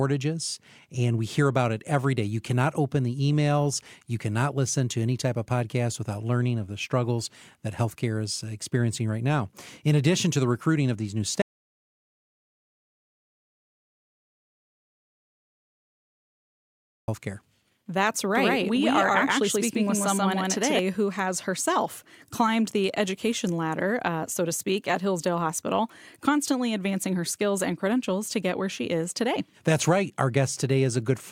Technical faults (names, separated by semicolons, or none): audio dropout to silence; doubled audio track